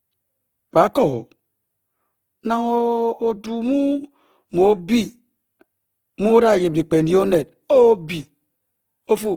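Throughout the speech, Opus compression damage is plainly audible. Tones sound grainy, rough and noisy rather than swirly. Starved bands are filled with folded or noise content, which fits the music mode at about 16 kbps. That low bitrate is the likely cause. Content still reaches 20.2 kHz.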